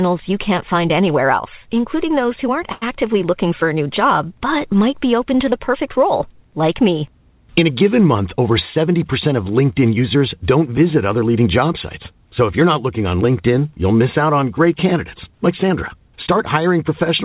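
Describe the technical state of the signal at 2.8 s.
A short stall from a late packet runs from 2.72 to 2.84 s. A packet arrived late, the jitter buffer ran dry, and the receiver filled the gap by stretching the last stretch of speech for 96 ms before resuming exactly where it stopped. Nothing is lost, but the sound is held unnaturally long, with a faint buzzy or dipping quality. Everything after it lands about 96 ms later. The narrowband call path, with nothing above 4 kHz, colours the sound throughout.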